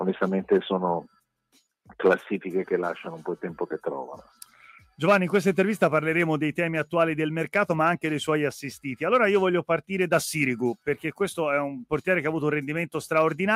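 At 4.34 to 4.56 s, the noise suppressor mistook part of the sound for noise. The sound cut by the noise suppressor sinks about 7 dB for roughly a fifth of a second.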